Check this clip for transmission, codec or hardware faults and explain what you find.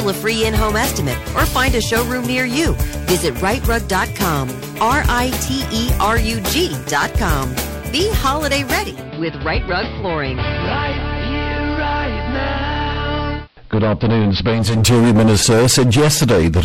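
Two faults are present: hard clipping across the whole clip, and a digital radio blend to analogue from 8.66 to 14.93 s.

Hard clipping runs throughout. The signal is driven about 15 dB past what a stage can pass, so the peaks are cut flat on around a tenth of the samples. Those flat tops add high harmonics, heard as a harsh fuzz on every loud sound.

Digital radio blending to analogue occurs from 8.66 to 14.93 s. The receiver lost the digital stream and cross-faded over 436 ms to the station's AM broadcast, then back. During that span the level drops about 3 dB, and hiss sits roughly 40 dB below the sound.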